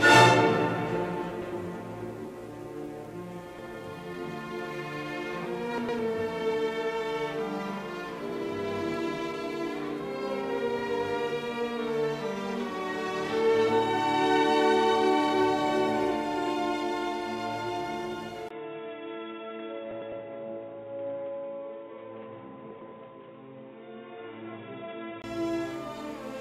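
Five short garbled flutters break up the audio at 1.31–1.52 s, 3.59–3.75 s, 5.78–5.99 s, 19.91–20.12 s and 22.71–22.92 s. These are frames out of order: two adjacent blocks of about 105 ms each (78 ms each in the second event) play swapped, with no time lost. From 18.49 s to 25.24 s the sound turns dull and boxy, with nothing above 3.8 kHz, after a 20 ms gap. It is also a few dB quieter over a new noise floor roughly 35 dB down, pointing to the input likely switched to a poorer device.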